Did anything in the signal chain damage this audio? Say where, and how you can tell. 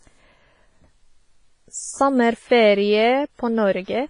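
Yes. Throughout the speech, a washy, ringing hiss breathes with the signal and nothing sounds above 10.3 kHz: heavy damage, likely WMA compression, with smearing and dropped weak components that fit roughly 24 kbps. Unlike a plain low-pass filter, the noise tracks the level.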